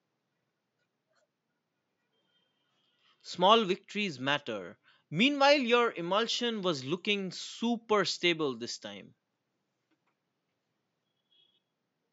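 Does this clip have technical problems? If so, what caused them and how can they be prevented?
No, the speech signal shows no technical problems, and the only background is the room's own noise, sitting about 54 dB below the speech.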